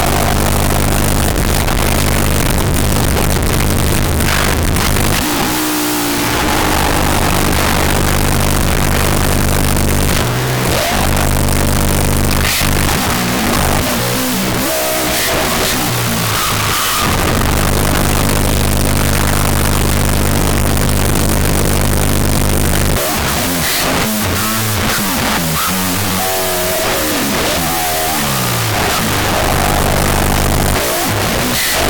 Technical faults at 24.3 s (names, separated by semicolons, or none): wrong sample width